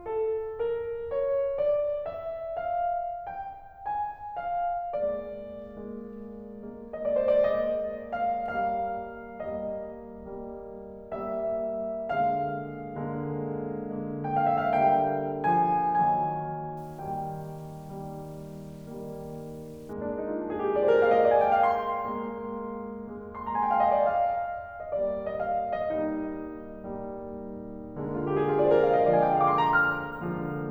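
From 16.77 to 19.93 s the music turns grainy, with a gritty distortion that tracks the sound and gets rougher in the quiet parts, sitting about 35 dB down. That's likely low bit depth without dither, consistent with 8-bit truncation.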